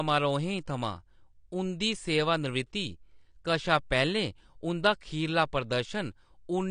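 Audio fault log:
Throughout, AAC compression: the speech sounds dull and smeared with nothing above 10 kHz, a low-bitrate AAC-LC encode likely stripping highs and leaving spectral holes.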